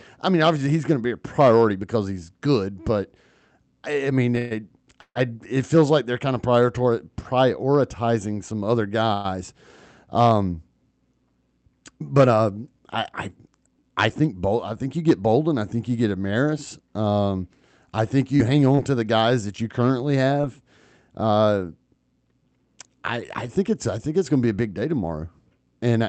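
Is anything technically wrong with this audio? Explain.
Yes, several call-network faults affect this speech, which passes through a call codec whose high end stops near 8 kHz.

Repeated stalls (stutter), 4.35–5.17 s: the jitter buffer ran dry three times, the longest for 143 ms. The receiver stretched the last sound, so the speech drags and stutters.

Call audio freeze, 9.13–9.26 s: a 109 ms continuation of the preceding sound, with no silence, interrupts the speech. Nothing is lost. The likely cause is packets held up in transit.

Jitter buffer speed-up, 13.39–14.13 s: to shed built-up delay, the receiver trimmed pitch-period slices, roughly a tenth of a second in total. Speech runs at 112% speed with unchanged pitch and sounds hurried.

Short concealed packet loss, 18.37–18.41 s, 18.75–18.79 s and 20.41–20.45 s: each time, 20 ms of audio never arrived and was filled by extrapolating the previous sound. 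Each one is heard as a brief smear or wobble.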